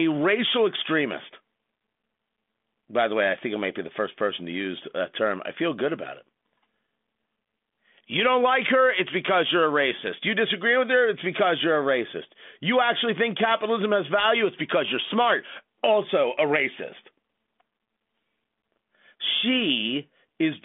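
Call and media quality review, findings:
Nothing stood out on listening to this speech call, which comes through the G.726 ADPCM path at 40 kbit/s with its usual telephone band, topping out around 3.7 kHz.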